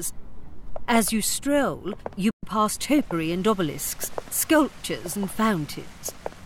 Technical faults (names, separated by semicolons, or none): playback stall; time-compressed catch-up